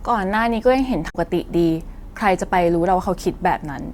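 At 1.06 s, damaged data in the compressed stream causes a blip lasting about 0.1 s, to 1.16 s. The decoder misreads corrupted frames and resyncs at the next header.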